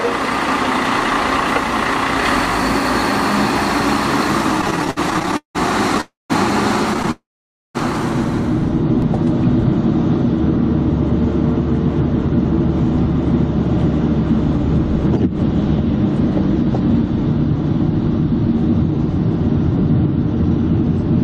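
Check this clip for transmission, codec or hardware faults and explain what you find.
Two transmission faults occur, both from delayed packets, and they cluster between about 4.6 and 7.8 s.

Repeated stalls (stutter), 4.61 to 6.01 s and 6.94 to 7.09 s: packets kept arriving more slowly than playback consumed them, so the jitter buffer emptied 21 times in the first span and 5 in the second. The receiver bridged each gap by extending the last sound, about 433 ms in total in the first span (longest gap 180 ms) and 53 ms in the second. That fill covers roughly a third of each span. Nothing is lost, but the audio drags and stammers.

Call audio freeze, 6.01 to 6.32 s and 7.11 to 7.77 s: these longer holds are likely caused by packets being held up in transit until the jitter buffer ran dry. The receiver continued the last sound as a fading tail, then went silent, for 170 ms of the 289 ms hold and 520 ms of the 637 ms hold. 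When packets resumed, playback picked up where it had stopped. Each freeze inserts a pause, and the audio runs later by the length of that pause afterwards.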